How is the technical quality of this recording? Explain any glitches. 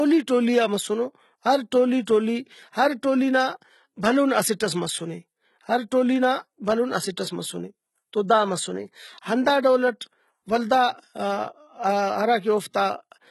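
The recording is compromised throughout by low-bitrate audio saved at a high bitrate. Nothing is present above 11.8 kHz for the whole clip, and the speech carries a smeared, watery codec texture. This likely comes from a very low-bitrate file, consistent with HE-AAC near 16 kbit/s, re-saved as high-bitrate MP3. The second encoding cannot restore the removed detail. Unlike a simple low-pass filter, the dull top end comes with compression artefacts.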